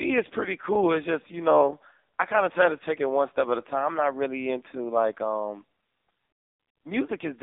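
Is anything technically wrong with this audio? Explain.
Yes. Throughout, an AMR narrowband mobile codec rebuilds the speech from a sparse pulse-driven vocal-tract model at a low rate, which fits its 6.7 kbps mode. The result is heavily buzzy, synthetic speech confined to about 250 Hz to 3.7 kHz, with nothing above 3.8 kHz.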